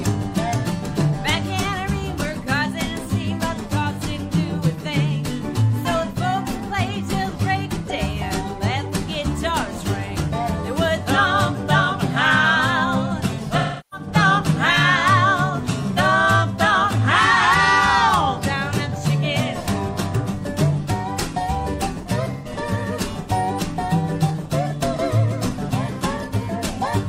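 AAC frame loss with concealment occurs at 13.58–14.07 s, 15.93–15.99 s and 22.33–22.52 s. The decoder fills each gap by reusing the last good spectrum, so the audio turns smeared and noisy. The first patch is the longest and fits about 341 ms of missing frames.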